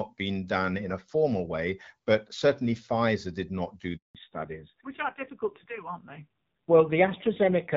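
At 3.97 s, just after "did not do", a handover gap opens as the call switches networks and no speech frames arrive, so the audio drops out for 180 ms. From 4.15 s to the end, a fallback to narrowband swaps the lightly damaged HD Voice path for an older codec, apparently a low-rate AMR-NB mode. Nothing above 4 kHz survives, leaving the speech duller and rougher.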